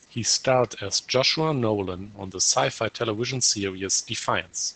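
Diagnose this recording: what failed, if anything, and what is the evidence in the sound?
The speech sounds muffled and hoarse from start to finish, with a slightly robotic edge and nothing audible above about 8 kHz. The failure is at the codec stage: Opus voice compression, running its SILK linear-prediction coder in wideband mode. The damage fits a low rate around 12 kbps. At that rate the excitation is coded too coarsely, so the source signal behind each sound turns rough and synthetic, and the band stops at 8 kHz.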